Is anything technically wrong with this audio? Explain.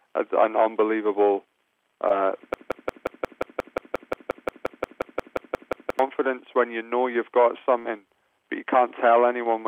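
Yes, there are three distinct faults.

From 2.08 to 2.11 s there is a short concealed packet loss. About 20 ms of audio never reached the decoder in time, so the receiver extended the preceding sound for roughly 16 ms and blended back into the real signal. It comes across as a tiny smear or wobble. Because the patch is so short, it never fades the way a longer burst does.

From 2.54 to 5.99 s the audio falls into a broken-record loop. A 177 ms fragment repeats identically, back to back, 19 times, most likely because the player or stream stalled and kept resending the last fragment it held. Unlike packet-loss concealment, the repeats are exact copies rather than a decaying continuation, and they neither soften nor drift. Everything that should have played across those three and a half seconds is lost.

From 7.79 to 7.86 s there is a burst of packet loss. About 60 ms went missing in one stretch. 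The receiver carried the last sound forward for roughly 58 ms while lowering its level, which produces a held buzz or hiss that dies away before playback resumes with that section skipped. What separates it from the earlier glitch is its greater length and the audible fade. What separates it from the loop is that nothing repeats.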